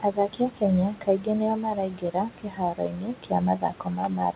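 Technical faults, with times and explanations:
Throughout: noise suppressor artifacts. The suppressor pulls down every band it judges to be steady background, frame by frame, by about 13 dB, so the room noise, sitting about 16 dB under the speech, dips in the gaps and swells back beneath each phrase. On a spectrogram the noise floor looks patchy and blotchy between phrases, with nothing visible above 4 kHz because of the narrowband call path.
0.01–0.41 s and 0.87–4.36 s: speech cut by the noise suppressor. In both stretches the suppressor mistook parts of the speech for noise and turned them down with the background, by up to about 13 dB. In the opening stretch this totals roughly a fifth of a second. Soft consonants and word tails come out swallowed or faint. In the waveform, phrase endings taper abruptly into near-flat troughs. On the spectrogram, faint high-frequency consonant energy is missing or broken into fragments.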